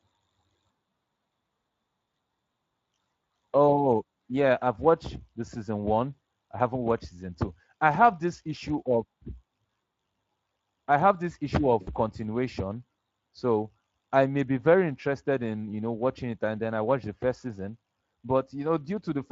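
This one's a speech recording, and the whole thing carries Speex codec damage you can plainly hear. The voice has that grainy, hoarse CELP texture because the encoder doesn't have many bits to describe the excitation signal, so the fine detail of the voice gets swapped for a noisier approximation. The amount of damage fits a mid-range Speex setting somewhere around 20 kbps. Then right after "I have this issue", from about 11.81 to 11.89 s, there's VoIP packet loss concealed by the speech codec. Roughly 60 ms of audio went missing, which points to about three lost frames. The decoder kept going by repeating its last pitch and filter shape at falling gain, so that stretch turns into a brief stretched sound that fades out. Because each concealed frame is built from the one before, the voice sounds a bit weak and off for a moment before it settles again.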